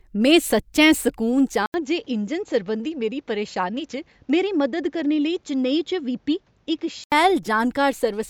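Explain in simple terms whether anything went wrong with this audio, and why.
Input switched to a poorer device, from 1.66 to 7.12 seconds. After a brief 80 ms gap, the speech turns duller, with nothing above 7.6 kHz, and gains a faint new background noise while staying at about the same loudness, likely because recording moved to a lesser microphone before switching back.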